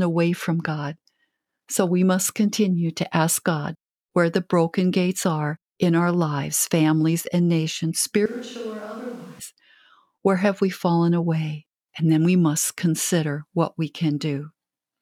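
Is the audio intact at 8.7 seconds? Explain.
No. From 8.26 to 9.39 s, just after "lives families and nations", the speech turns abruptly roomy, hollow and thin, about 10 dB quieter, with room noise only about 25 dB below it. This is likely a switch to a distant microphone. The added reverberation and noise separate it from a simple level dip.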